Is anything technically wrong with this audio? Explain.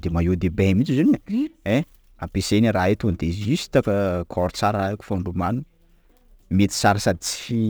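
Yes. Sample clock jitter runs throughout the speech. The converter's clock wavers by roughly 5 microseconds, so each sample lands slightly off time, and the error scales with how steeply the waveform moves. It sits around 30 dB below the signal as a gritty hiss that swells on loud, bright syllables and disappears in pauses.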